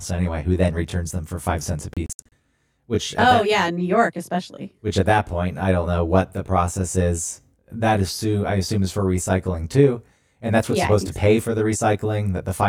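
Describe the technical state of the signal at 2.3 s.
At 2.3 s a digital broadcast dropout is ending. It runs from 1.94 to 2.32 s, just after "for five cents a". The receiver muted frames it could not decode. About 192 ms of sound is lost in short holes, the longest 64 ms.

A channel delay (comb filtering) is also present. One channel lags by roughly 20 ms, and the mono sum cancels at evenly spaced frequencies from near 20 Hz. The sound is rough or slightly doubled.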